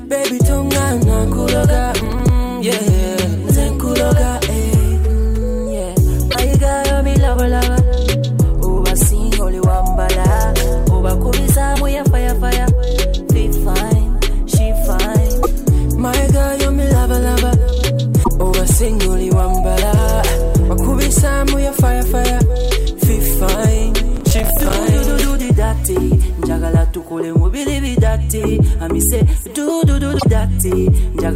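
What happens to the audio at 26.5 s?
Nothing goes wrong at 26.5 s; the audio there plays through intact, with no dropout, click, glitch or other fault at that moment.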